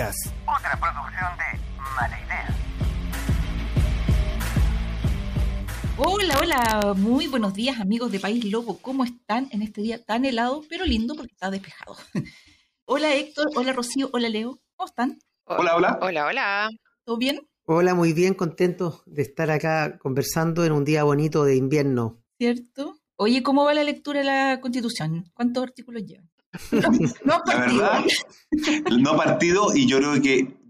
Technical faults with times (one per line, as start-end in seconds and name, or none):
6.04-6.82 integer overflow
17.29 integer overflow